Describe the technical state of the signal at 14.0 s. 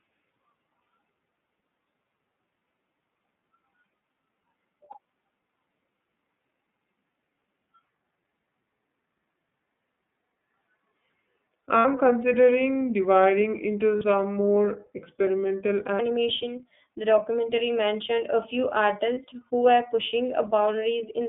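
Right at 14.0 s there's a lost iLBC frame, running from about 13.97 to 14.02 s. The decoder filled the gap by repeating the last pitch cycle blended with noise, so you hear a brief held, slightly buzzy vowel-like smear. Because iLBC frames are coded independently, the sound snaps back cleanly right after.

Under that, the whole line is the iLBC codec itself, and its damage is plainly audible. The band is squeezed to roughly 150 Hz to 3.6 kHz, and the excitation is coded frame by frame, which points to the 30 ms frame mode. That gives the audio a thin, slightly rough, synthetic edge.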